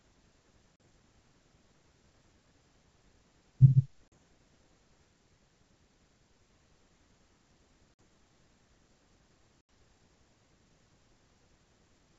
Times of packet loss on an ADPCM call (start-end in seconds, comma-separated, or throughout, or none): 0.76-0.80, 4.10-4.13, 7.94-7.99, 9.61-9.69